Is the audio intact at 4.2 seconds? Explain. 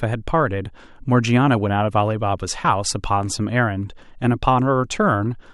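Yes, at 4.2 seconds the speech plays through intact, with no dropout, click, distortion or other audible fault at that moment.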